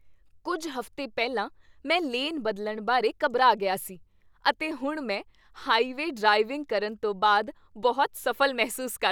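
Speech recording with no audible technical faults.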